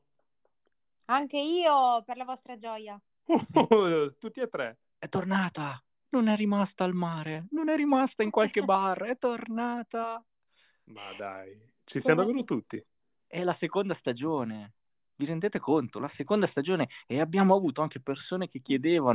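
Nothing in this speech recording gives a listener anything to flag, so there's no fault to point out here.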